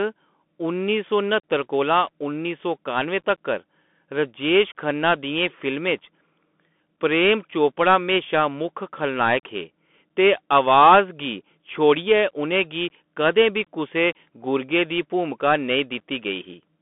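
Throughout the speech, the sound carries the Bluetooth CVSD headset codec's signature: a narrow telephone band running from about 200 Hz to 3.5 kHz, with nothing above 3.8 kHz, consistent with a 64 kbps one-bit delta stream. Its adaptive step lags on loud, bright passages, so sibilants turn scratchy and a granular hiss sits beneath everything. A spectrogram shows a hard ceiling near 3.8 kHz and a grainy noise floor.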